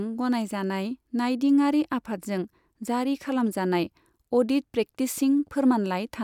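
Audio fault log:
Nothing to log here; I couldn't hear any faults anywhere in this speech recording.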